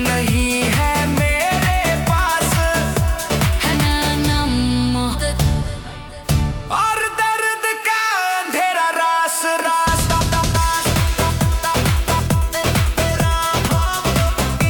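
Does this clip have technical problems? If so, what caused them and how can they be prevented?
Yes. Compressed frames were skipped at 3.71, 5.12, 10.54 and 13.65 s. Each time the audio jumps ahead by roughly a third to three quarters of a second, in steps that fit 42.7 ms frames. To prevent this, verify the file's integrity after encoding and transfer, and use error-protected delivery.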